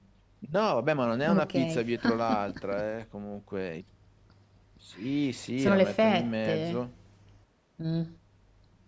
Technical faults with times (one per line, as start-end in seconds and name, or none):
none